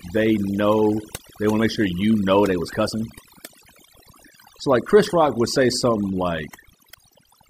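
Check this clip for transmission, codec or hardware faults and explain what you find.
Throughout, the gaps between phrases drop to near silence flecked with twinkling specks. This is overdone noise removal: a noise reducer set too aggressively pulls individual frequency bands down whenever they resemble its noise estimate, taking quieter voice detail with them.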